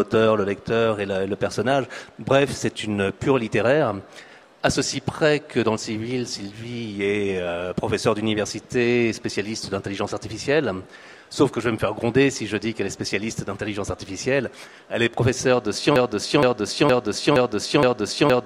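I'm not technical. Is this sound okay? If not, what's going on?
No. The player or stream likely stalled at 15.96 s and kept resending the last scrap it held, a broken-record loop. From there to the end, the same half-second snippet (0.47 s) plays five times back to back, and whatever should have followed is lost.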